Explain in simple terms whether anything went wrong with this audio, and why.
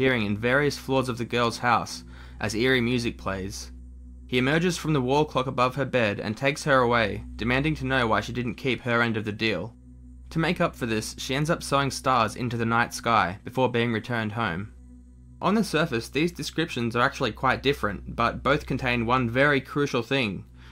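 Nothing went wrong here, so there's nothing to explain away, just sound doing what it should the whole way.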